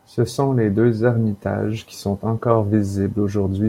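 No technical faults are audible.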